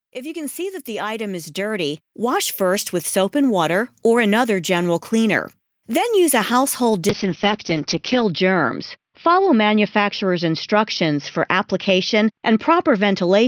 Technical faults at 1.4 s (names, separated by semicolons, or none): automatic gain rising